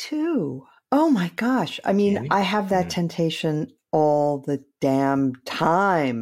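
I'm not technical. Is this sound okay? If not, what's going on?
Yes, no faults to report.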